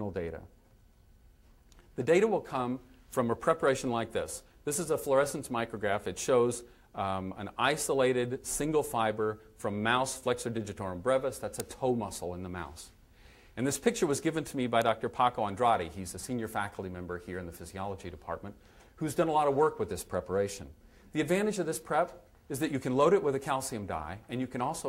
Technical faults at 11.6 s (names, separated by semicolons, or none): electrical switching spike